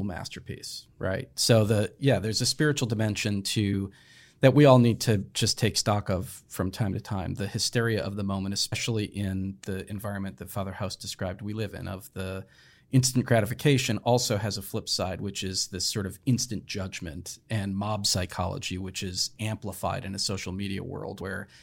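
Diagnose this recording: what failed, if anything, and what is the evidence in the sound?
Compressed frames were skipped during decoding. The speech jumps ahead at 3.73 s, 8.71 s and 21.2 s. Each jump drops two or three 26.1 ms frames, roughly 50 to 70 ms.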